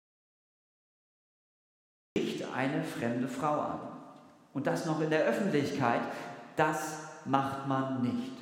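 From the very start until 2.16 s, the audio drops out to silence. There is no room tone, only silence. Sound enters abruptly at 2.16 s. The likely cause is a lost input, such as a disconnected device or a mute, while recording continued.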